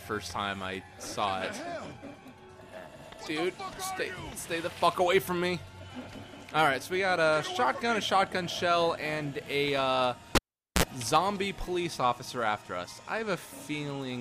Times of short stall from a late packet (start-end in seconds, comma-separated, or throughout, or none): none